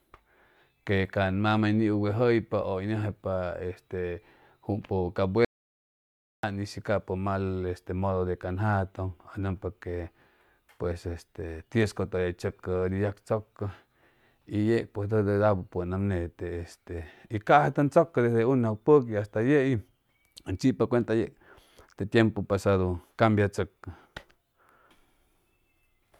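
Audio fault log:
5.45–6.43 s, audio dropout to silence: the speech cuts off abruptly mid-flow and returns just as suddenly about 0.99 s later, with silence in between and no room tone or noise floor at all, so whatever was said in that span is lost. The likely cause is a brief loss of the input signal while recording carried on writing silence. On the waveform this is a flat line; on a spectrogram, a fully blank vertical band with hard edges.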